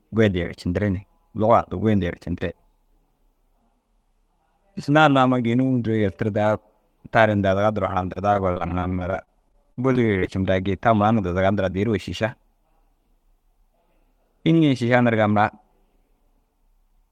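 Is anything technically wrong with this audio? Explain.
Yes. From 8.33 to 10.29 s there is repeated packet loss with robotic sound. Many short gaps, the longest 37 ms, are patched by repeating the preceding sound. The result is choppy, robotic speech.

From 11.87 to 12.99 s comes a jitter buffer speed-up. Short pitch-period pieces, about 50 ms in total, are removed to cut delay. The speech runs at 104% with unchanged pitch.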